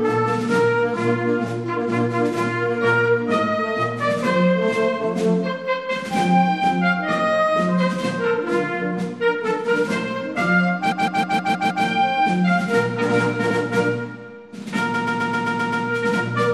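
Throughout the clip, the encoder appears to have been short of bits, which fits MP3 compression at a low rate around 64 kbps. It likely cut the treble at a fixed frequency and dropped weak frequency lines that flicker on and off from frame to frame. The damage is plainly audible: a watery, swirling texture, metallic chirps on bright sharp sounds, and attacks that smear instead of landing cleanly.

Three times, a run of compressed frames was delivered more than once, so the decoder replays the same short stretch. This is repeated frames, heard as a mechanical stutter. From 10.91 to 11.85 s, a 157 ms block plays six extra times, adding about 0.94 s. At 13.50 to 13.60 s, a 105 ms block repeats once. From 14.93 to 15.85 s, a 131 ms block plays seven extra times, adding about 0.91 s.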